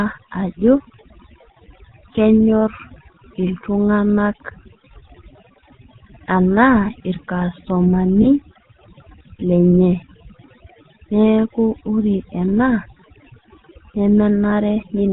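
Throughout, overdone noise removal has pushed bands that sit near the noise floor down to almost nothing, leaving near-silent gaps with twinkling specks; a spectrogram shows blank background pocked with isolated dots. Also throughout, the GSM full-rate codec gives a buzzy, gravelly roughness, consistent with 13 kbps coding. Its pulse-driven excitation shows as regular striations, with a hard ceiling at 4 kHz. Lost GSM frames occur at 8.22 to 8.27 s and 14.50 to 14.53 s, each pointing to a single dropped frame. The previous frame's settings repeat, producing a brief metallic ring that looks like a short smeared, uniform patch in the waveform.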